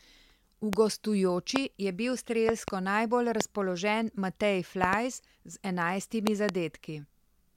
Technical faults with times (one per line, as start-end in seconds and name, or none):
0.73-0.75 loud pop
1.56-1.58 loud pop
2.49-2.70 loud pop
3.41-3.43 loud pop
4.84-4.95 loud pop
6.27-6.51 loud pop